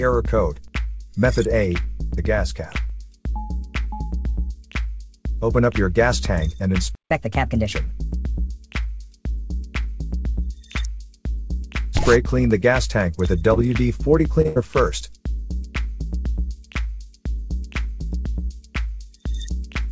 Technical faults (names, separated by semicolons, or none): playback stall; catch-up at higher speed; short concealed packet loss; burst of packet loss